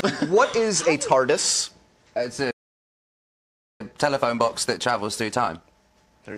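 At 2.50 s the sound cuts out mid-flow and stays silent until 3.81 s, roughly 1.3 seconds of dead air. That's a playback stall, likely the player running dry or its thread getting blocked, so nothing reached the output until it recovered.

From 3.81 s to the end the audio comes back hurried, running about 1.1 times normal speed but at its usual pitch. That's time-compressed catch-up: the player is trimming small chunks and cross-fading over the joins to work off the backlog.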